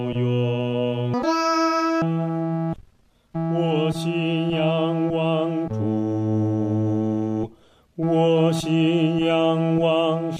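Audio read two samples at a time (double speed) occurs from 1.14 to 2.02 s. The player consumes pairs of samples as single frames, as if expecting two channels or wider samples, so this stretch plays twice as fast and an octave (12 semitones) higher.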